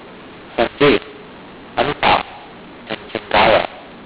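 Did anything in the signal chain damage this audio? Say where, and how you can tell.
Yes. Throughout the speech the level sounds scrambled and harsh, with pauses filled by hiss instead of silence. That is mu-law and A-law mixed up at the codec stage: audio written as G.711 A-law, read back as mu-law, mapping each byte to the wrong amplitude.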